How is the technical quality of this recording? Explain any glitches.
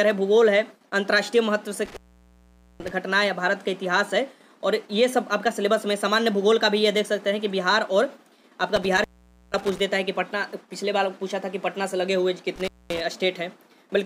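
The recording is marred by three dropouts from an intermittent contact, at 1.86 to 2.91 s, 8.76 to 9.80 s and 12.56 to 13.01 s. A loose cable or plug briefly breaks the signal path. The sound vanishes for about 0.84 s, 0.48 s and 0.22 s respectively, with crackle as the connection scrapes open and shut and only faint hiss in between. The waveform collapses to a near-flat line, and the spectrogram shows a dark gap with bright broadband streaks at each edge.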